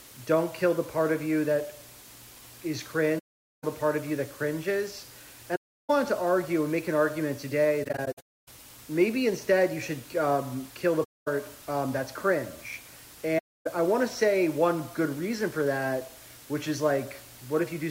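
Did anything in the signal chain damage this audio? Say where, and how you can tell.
Yes. Sample-format conversion reduced the audio to low bit depth with dither, about 6 bits, leaving a steady, even hiss roughly 20 dB below the signal, with no distortion.

AAC frame loss with muting hits the codec stage: soft-edged silent gaps at 3.18–3.64, 5.55–5.90, 7.83–8.48 (broken up), 11.04–11.28 and 13.38–13.67 s, where muted frames fade out and back in.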